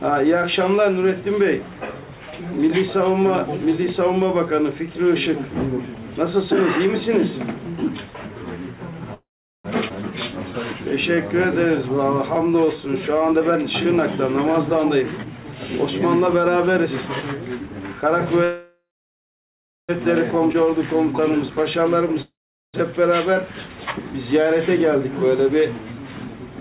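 At 9.14 s the sound stops and a fading buzz carries the last moment on for about 0.5 s, most of it (about 0.41 s) silent, before resuming at 9.66 s exactly where it left off. This is a call audio freeze, likely packets held up until the jitter buffer ran dry. Unlike a skip, it adds a gap and loses nothing.

From 9.88 to 9.92 s comes a skip ahead: roughly 0.3 s of audio is simply gone, and the two sides are butted together with almost no gap. The abrupt jump forward, not a pause, is what distinguishes it from the freeze.

A jitter buffer slow-down runs from 10.32 to 13.24 s. Repeated pitch periods add 179 ms, so playback drags at 94% speed while pitch stays put. Sounds are drawn out rather than lowered as a slowed tape would be.

Straight after, from 13.31 to 17.22 s, a jitter buffer speed-up trims roughly 0.4 s in small pitch-period cuts. The audio runs at 110% speed, hurried but at unchanged pitch, the opposite of the stretch just before it.

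The freeze returns from 18.44 to 19.91 s, longer this time: about 1.45 s inserted, around 1.06 s of it silence after the buzz decays. A second skip ahead at 20.53 to 20.56 s drops roughly 0.7 s. A third freeze fills 22.22 to 22.76 s, about 0.52 s, with roughly 0.42 s silent. Throughout, nothing is heard above 4 kHz, which fits a G.711 A-law call path at 64 kbps.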